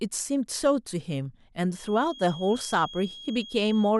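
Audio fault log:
1.67–3.99 s, feedback whistle: a thin 3.3 kHz tone sits around 20 dB under the speech and swells and fades slowly in level to the end. It is likely from a loudspeaker-to-microphone loop held at the edge of feedback. A spectrogram shows one unbroken horizontal line at 3.3 kHz.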